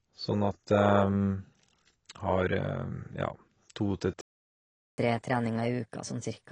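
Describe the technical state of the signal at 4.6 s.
At 4.6 s the output is silent, inside a playback stall running from 4.21 to 4.98 s, about 0.77 s. The speech stops mid-flow and then resumes. The likely cause is the player running out of data, or its thread blocking, until it recovered.

The surrounding speech also carries plainly audible AAC compression damage, with a dull, smeared tone and a warbling, fizzy texture on sibilants. This is likely AAC-LC coding at a low rate, and the damage fits roughly 24 kbps.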